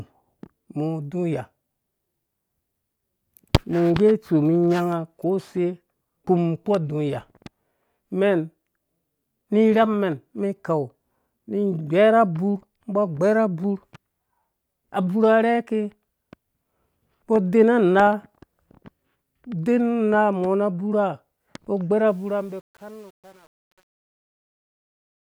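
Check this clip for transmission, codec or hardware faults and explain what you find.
One fault is present in this speech clip, during the fade-out that runs from about 22 s to 25.20 s.

Truncation distortion on a fade, 22.07 to 25.20 s: the fade is computed with only 9 bits and no dither, so the decaying waveform collapses into coarse square steps. From 22.42 s to the end the tail turns gritty.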